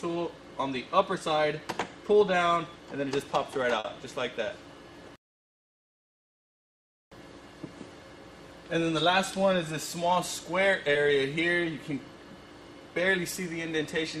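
At 3.79 to 3.87 s, a short stall from a late packet stretches the last sound by 50 ms, with nothing lost. On a spectrogram it appears as a frozen, smeared band. The same happens at 10.93 to 10.98 s with a 20 ms hold. Between these, from 9.80 to 10.45 s, a jitter buffer speed-up cuts about 50 ms in short pitch-period slices to drain excess delay. The audio runs at 107% speed with unchanged pitch and sounds hurried, and the waveform shows whole repeating cycles dropped out.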